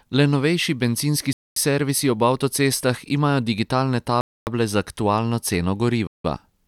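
A Bluetooth stall, likely from the headphone buffer running dry, cuts the speech to silence at 1.33–1.56 s, 4.21–4.47 s and 6.07–6.24 s before it resumes.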